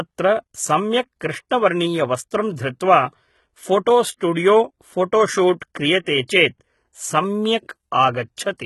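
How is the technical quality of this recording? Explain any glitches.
The recording has heavy codec damage throughout, plus six brief smeared attacks.

HE-AAC compression, likely, runs through the whole clip. The codec stores only the lower spectrum. It then rebuilds the treble by copying lower bands upward and shaping them roughly. That synthetic top does not match the real harmonics. Sibilants sound gritty, metallic or lispy. Nothing remains above about 11.8 kHz. The damage is heavy, which fits a very low bitrate near 16 kbps.

Pre-echo appears at 1.20 s, 1.49 s, 4.17 to 4.21 s, 5.60 s, 6.03 to 6.06 s and 6.28 s. The codec spreads its noise across a whole block. When a sharp onset lands late in that block, the noise leaks into the quiet moment before it. Each attack gets a short hiss ahead of it, lasting 10 to 38 ms, and sounds soft and smeared.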